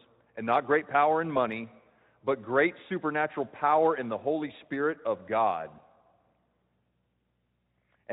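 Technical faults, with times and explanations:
Nothing faulty is audible anywhere in this speech.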